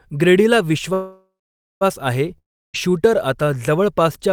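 At 0.93 s the speech stops and the last sound carries on as a fading buzz, then about half a second of silence, before speech resumes at 1.83 s. This is a call audio freeze. Packets were likely held up in transit, so the jitter buffer emptied and the receiver filled the wait. Nothing is lost: speech picks up exactly where it broke off, now running about 0.88 s later than before.

From 2.38 s to 2.76 s there is a long network dropout. The sound again trails off into a fading buzz and then about a third of a second of silence. The cause is likely audio that never arrived. Unlike the freeze, speech does not resume where it stopped. It returns further on, with about 0.36 s of the original skipped, so the gap replaces lost material rather than delaying it.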